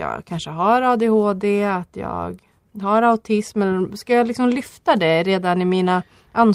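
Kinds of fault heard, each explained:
No faults heard in the speech recording.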